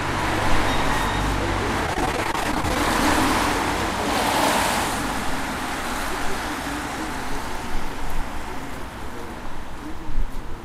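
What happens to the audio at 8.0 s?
Nothing goes wrong at 8.0 s; the sound continues intact through that moment, with no dropout, click or distortion.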